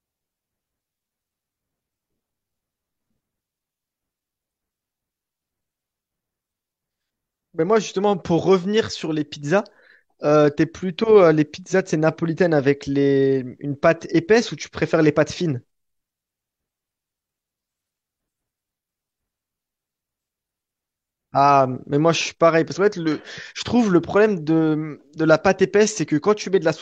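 Nothing in the speech stood out as a technical fault on listening.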